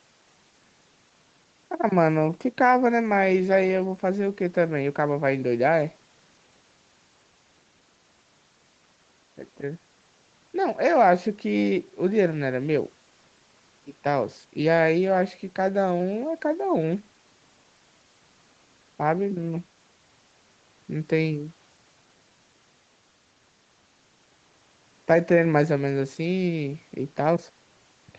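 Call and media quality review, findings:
No faults found; mic processing and call path nominal.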